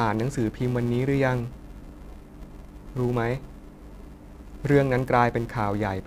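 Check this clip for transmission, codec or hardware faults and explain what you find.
There's one fault running through the whole speech clip: a filter restarted on every block. Each block starts from a cleared state and ticks, giving a 345 Hz buzz that tracks loudness, which fits 128-sample blocks.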